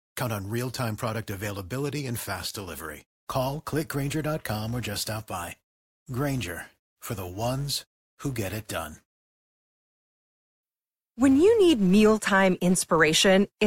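From 2.45 s to the end of the speech, a filter restarted on every block resets its state, so each block starts from silence with a small transient. This produces a level-tracking buzz at 188 Hz, which fits 256-sample blocks at 48 kHz.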